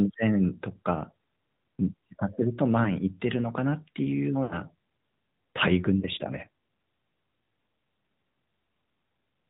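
The whole clip runs through the AMR narrowband mobile codec. Nothing above 4 kHz survives, and the speech has a clearly buzzy, synthetic edge, which fits a mid-rate mode around 10 kbps.

Then come lost AMR speech frames. At 2.84 to 2.96 s there's a brief warbly dip, about one dropped frame's worth. At 4.44 to 4.59 s the sound smears and fades before recovering roughly, which sounds like about three frames in a row. At 6.00 to 6.05 s there's another short single-frame dip.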